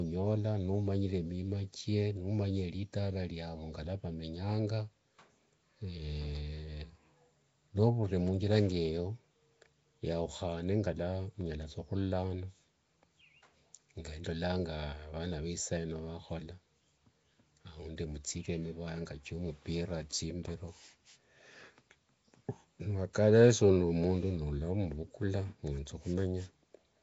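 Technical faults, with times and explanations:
Throughout, Nellymoser compression: plainly audible rough hiss and a smeared, underwater quality, likely from the Nellymoser Asao codec at a rate fitting 32 kbps, whose sparse bits leave weak bands filled with noise. A spectrogram shows nothing above 7.7 kHz and grainy, blurred harmonics.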